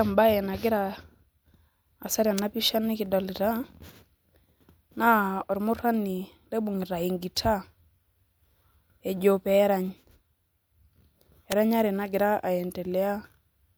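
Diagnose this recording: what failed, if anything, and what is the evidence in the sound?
Two sharp snaps sit on top of the speech at 2.38 s and 11.52 s, each only a few milliseconds long and peaking fairly high, the second louder. This is likely an electrical switching spike picked up in the analogue wiring from a nearby switch or motor arc. Unlike a dropout or buffer glitch, the speech carries on uninterrupted underneath.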